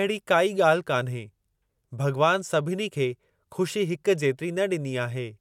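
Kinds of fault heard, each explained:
Nothing stood out on listening to this speech recording.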